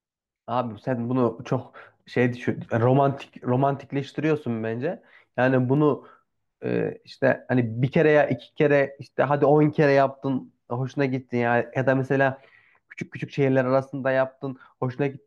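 CD scratch ticks appear between 5.42 and 5.77 s: three short ticks, roughly six per second, each lasting under a millisecond. A scratch or blemish on the disc damages more data than the error correction can rebuild, and because the laser crosses the flaw once per revolution, the damage recurs at a steady rate. The player conceals each bad patch by interpolating or muting those samples, leaving brief clicks or tiny gaps over the speech.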